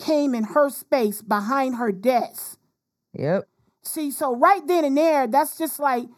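Channel delay (comb filtering) is present from start to finish of the speech. One channel arrives a fraction of a millisecond behind the other, and when the two are folded to mono the shared signal cancels at evenly spaced frequencies. With a delay this short, the first notch falls around 3 kHz, with further notches higher up. The result is a constant hollow, phasey quality.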